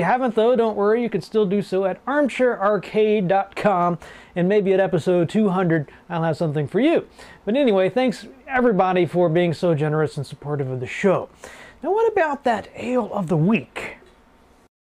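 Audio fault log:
0.17 to 14.92 s, clock slip clicks: Faint, regular ticks run through almost the whole clip, about ten per second. Each one is a single-sample jump in the waveform. The steady spacing, roughly 0.1 s apart, points to two devices likely running on separate, unsynchronised clocks, off by something like 200 ppm. Each time the drift adds up to a whole sample, one is dropped or repeated. That makes around 150 tiny discontinuities, heard as a light, even ticking.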